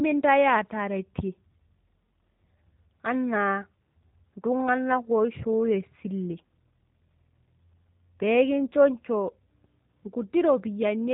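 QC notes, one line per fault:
throughout, G.729 codec: nothing above 4 kHz survives, and the speech has a plainly audible rough, synthetic texture, because each short frame is rebuilt from a vocal tract filter, a pitch predictor and a few pulses. This fits an 8 kbit/s G.729A stream.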